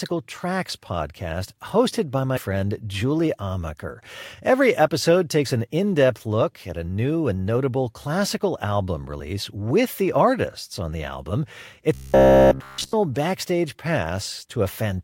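Compressed frames skipped at 2.36 to 2.38 s: the speech jumps forward by roughly 70 ms, which fits about seven missing or rejected frames of the compressed stream.

Robotic sound from repeated short buffers between 11.94 and 12.95 s: the voice becomes a rigid metallic buzz at 66.8 Hz for that whole stretch. The likely cause is audio arriving too seldom, so a piece of about 15 ms is replayed over and over while new speech is skipped.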